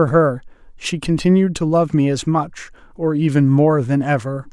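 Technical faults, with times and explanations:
No technical faults are audible in this speech recording.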